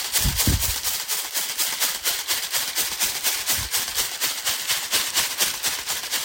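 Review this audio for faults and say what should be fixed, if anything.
Block size mismatch (truncated), throughout: the tail of each block is discarded, leaving a buzz at 91.9 Hz, while the tiny size difference keeps playback at essentially normal speed. Match the block size each stage writes to the size the next stage reads.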